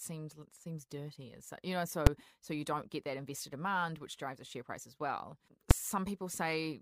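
Two sharp, very loud bangs cut through this speech clip, one at 2.07 s and another at 5.71 s, each over almost instantly. They come from invalid numbers at full scale: a calculation produced infinite or invalid values that were forced to the largest possible sample value, holding the output flat at one extreme value, well beyond the speech peaks, for a block of about 5 ms. That block is too short to hear as a separate start and end, so each event lands as a single bang.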